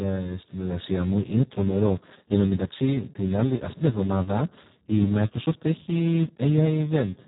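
From the first second to the last, the speech carries heavy Speex codec damage. At around 4 kbps the CELP coder has almost no bits for the excitation signal, so the voice comes out hoarse, noisy and close to robotic, like a crude vocoder. The audio is also band-limited with nothing above about 3.8 kHz, giving a muffled, narrowband telephone character with no sibilant detail.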